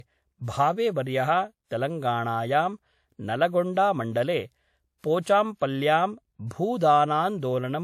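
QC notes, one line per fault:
Throughout, low-bitrate audio saved at a high bitrate: the speech has nothing above about 15.9 kHz and carries the artefacts of an earlier low-bitrate encode, even though the MP3 it sits in is a generous one. That pattern fits a likely earlier pass through something like a 64 kbit/s WMA before re-saving at around 256 kbit/s. The bigger second encode just preserves the first one's damage and can't bring back the missing top end.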